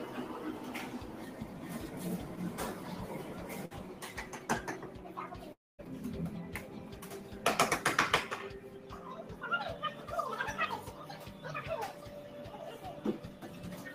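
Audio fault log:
throughout: noise suppressor applied to music or sounds. A speech-oriented suppressor treats sustained tones, ambience and decay tails as noise and pulls them down by a few decibels, around 5, while onsets pass mostly intact. The sound pumps and thins as held material sinks after each attack. On a spectrogram, steady partials and reverb tails fade or flicker in patches rather than decaying smoothly. The waveform envelope dips just after each transient.
3.65–3.73 s: burst of packet loss. A short run of audio never arrived in time. The receiver bridged about 52 ms by repeating the last sound and fading it, so a brief held buzz or hiss takes the place of the real material. Playback then resumes about 60 ms further on, with that stretch missing. A spectrogram shows a smeared, repeated texture that darkens, then an abrupt jump in content. The waveform shows a tapering repeated pattern, then a discontinuity.
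5.53–5.80 s: long network dropout. The receiver first extends the last sound as a fading buzz or hiss for about 50 ms. About 210 ms of near-silence follows. The audio returns about 260 ms further along, and the sound that should have played in between is lost. This pattern points most likely to a network interruption. On a spectrogram, a smeared tail fades into a dark, empty band before content reappears abruptly. The waveform flattens almost to zero.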